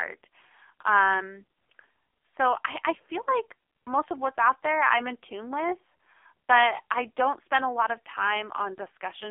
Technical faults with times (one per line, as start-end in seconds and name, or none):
0.00-9.31 AMR narrowband mobile codec